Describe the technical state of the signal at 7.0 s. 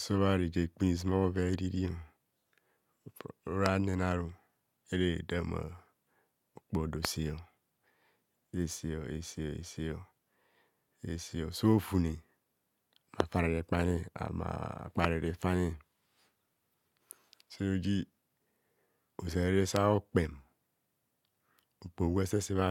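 A single loud pop sits on the speech from about 7.05 to 7.07 s, a sharp click lasting roughly 20 ms and peaking about 20 dB above the surrounding signal. The speech carries on beneath it without interruption. The likely cause is a brief voltage step or spike entering the chain, such as a connector, switch, static discharge or driver glitch. The downstream circuitry shapes that pulse into the short, percussive transient heard here.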